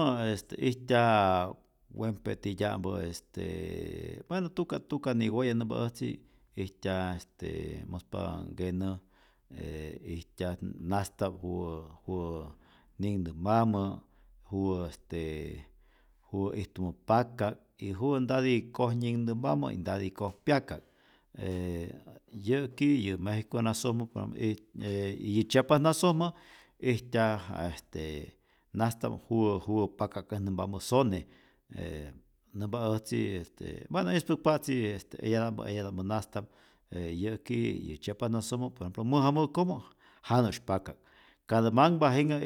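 Nothing in the speech stood out as a technical fault on listening.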